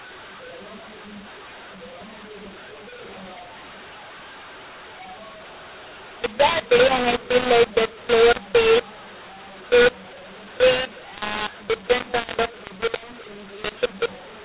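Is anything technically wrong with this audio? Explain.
Yes. A mu-law and A-law mix-up runs through the whole recording. The speech was encoded with the A-law curve but decoded as mu-law, so every level is remapped wrongly. The speech turns harsh and distorted, the faintest samples are pushed up, and pauses fill with hiss. Beneath this, the telephone band stops at 4 kHz, which fits ordinary G.711 coding at 8,000 samples a second.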